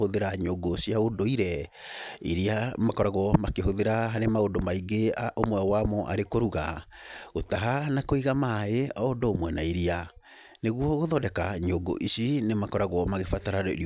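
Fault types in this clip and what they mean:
No technical faults can be heard in the recording, and the signal stays steady and intact throughout.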